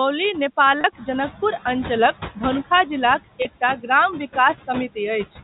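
Noise suppressor artifacts run through the whole clip. The suppressor pulls the steady background down by about 13 dB between phrases and lets it rise again under the speech. This is most audible once the room noise steps up around 1 s.

At 0.81–0.84 s and again at 3.42–3.45 s there is packet loss with pitch repetition. Each gap is about 30 ms, which fits a single lost packet. The receiver fills it by repeating the last pitch period, heard as a brief held, buzzy tone.

From 3.61 to 3.89 s the noise suppressor cuts speech. It mistakes soft parts of the speech for background and turns down roughly a tenth of a second of them, by up to about 11 dB, so those sounds come across swallowed and faint.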